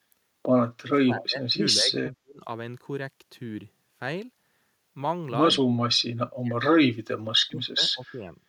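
Speech in this recording is twice pulled down in pieces, from 0.77 to 2.42 s and from 5.72 to 8.37 s, with drops reaching roughly 35 to 40 dB. The pattern suggests speech suppressed in double talk, likely an echo canceller muting the talker while the far end also spoke. Unlike packet-loss dropouts or a noise gate, the level dips and returns irregularly over stretches of more than a second instead of snapping cleanly.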